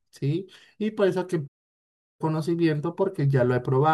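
A speech clip with one playback stall. At 1.47 s the speech cuts to silence mid-flow. It resumes at 2.21 s, after a gap of about 0.72 s. The likely cause is the player running out of buffered data or its thread being blocked.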